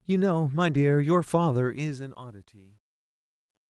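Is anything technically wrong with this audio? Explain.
Yes. This speech has two faults.

At 0.73 s there is a lost packet rebuilt from error correction. One packet went missing. The following packet carried a low-bitrate copy of it. The decoder played that copy, so no gap opens. For about 20 ms the sound turns rougher and noisier. The copy holds less detail than the original frame. The rest of the call runs through Opus with its top end cut at 12 kHz.

From 1.6 s to the end there is truncation distortion on a fade. A fade-out begins around 1.6 s. The stage doing it keeps too few bits and adds no dither. The behaviour fits a 10-bit path. As the level sinks toward the smallest step, the waveform collapses into coarse square steps. The tail grows gritty. From 2.44 s it is worst.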